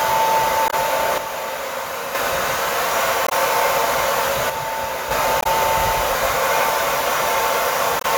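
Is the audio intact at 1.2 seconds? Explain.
No. From 1.18 to 2.15 s the sound falls abruptly by about 6 dB. The likely cause is that one channel drops out, halving the mono sum.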